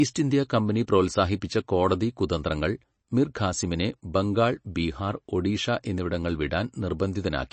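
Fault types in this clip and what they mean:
MP3 compression: The speech sounds plainly watery and swirly, with nothing above 8.3 kHz, so s sounds are dulled. This is likely MP3 coding at a bitrate that fits about 32 kbps, where the encoder cuts the treble and drops weak frequency components from frame to frame.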